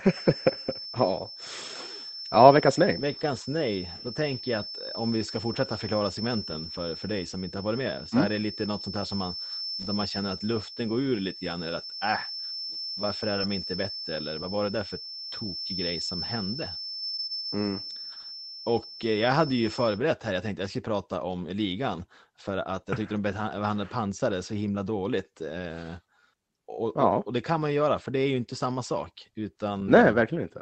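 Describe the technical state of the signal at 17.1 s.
At 17.1 s the speech has a brief smeared, wobbly patch. This is short concealed packet loss, the last of three back-to-back gaps at 16.99, 17.04 and 17.08 s, ending at 17.12 s. About 20 ms went missing each time. The receiver bridged each hole by extending the preceding sound for roughly 20 to 25 ms, then blended back into the real audio.

Underneath sits a thin whistle at 5.3 kHz, roughly ten decibels below the speech, swelling and fading slowly in level. This feedback whistle runs from the start until 20.03 s, stopping just before "här jag tänkte jag". It likely comes from a loudspeaker-to-microphone loop held right at the edge of feedback.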